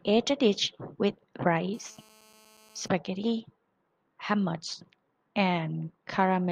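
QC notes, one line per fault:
1.74 to 2.88 s, GSM phone buzz: a nearby 2G phone on a call is transmitting radio bursts about 217 times a second, and a stage in the audio circuit rectifies those pulses into the signal path. The result is a hard, raspy buzz at 217 Hz, rich in harmonics, sitting about 30 dB below the speech and unrelated to it. It holds steady for the whole span before stopping, as expected while a call is in progress.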